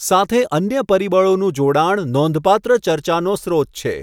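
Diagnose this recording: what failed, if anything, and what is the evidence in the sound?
Nothing failed: the sound of the recording gives no evidence of a fault at any stage.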